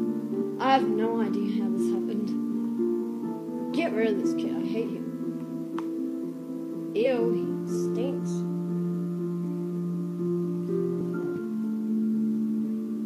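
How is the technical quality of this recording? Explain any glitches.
The recording has four brief glitches from damaged data in a compressed stream: 0.38–0.42 s, 2.98 s, 7.02–7.07 s and 10.96–11.01 s. Corrupted bytes made the decoder misread frames and lose sync. Each one sounds like a chirp, squawk, click or short hole.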